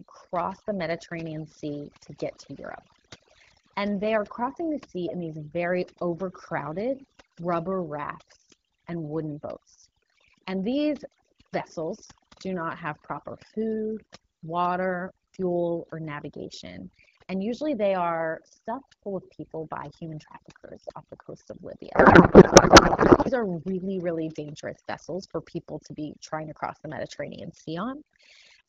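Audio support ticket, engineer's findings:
Overdone noise removal, whole clip. Background pulled down and broken up into twinkling specks. Probable component: noise suppressor set too aggressive. Mechanism: individual frequency bands near the noise estimate are cut hard or muted, taking the quiet speech detail with them. Underlying AMR-WB coding sounds clear, consistent with about 12.65 kbit/s.

Codec payload misread, 21.95 to 23.31 s. Speech replaced by garbled noise and warble that barely tracks it. Probable component: AMR-WB depacketiser. Mechanism: the decoder reads well-formed frames with fields at the wrong bit positions. The symptom points to octet-aligned AMR read as bandwidth-efficient. Clears once both ends agree on the format.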